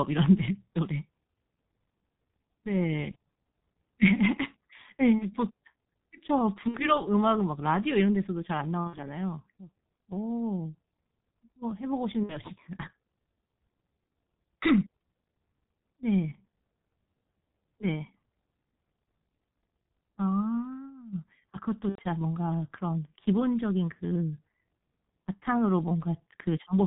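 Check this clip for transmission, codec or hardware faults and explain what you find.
Two faults are present: heavy low-bitrate codec damage throughout, and six concealed packet-loss dropouts.

The G.723.1 codec shapes the whole clip. The speech is muffled, with nothing above 4 kHz. It sounds hoarse, and consonants smear together. The codec damage is heavy, which fits its 6.3 kbit/s mode. It codes the voice in 30 ms frames and updates its model of the voice slowly. Quick changes between sounds get blurred.

VoIP packet loss concealed by the speech codec occurs six times: 3.11 to 3.16 s, 5.18 to 5.32 s, 6.68 to 7.00 s, 8.87 to 8.97 s, 12.23 to 12.37 s, and 21.89 to 22.01 s. Each gap points to one to three lost 30 ms frames. The largest loss, at 21.89 s, fits about 90 ms missing. The decoder fills each hole by repeating its last pitch and filter at falling gain. This produces a buzzy tone or coloured noise that fades. 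Each frame depends on the previous one, so the voice stays weak or distorted after the packets return. That is why the disturbed stretches outlast the lost audio.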